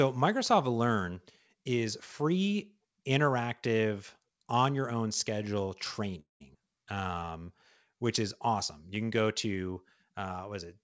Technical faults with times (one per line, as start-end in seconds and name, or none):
6.20-6.42 call audio freeze
6.54-6.56 skip ahead
6.95-7.45 jitter buffer slow-down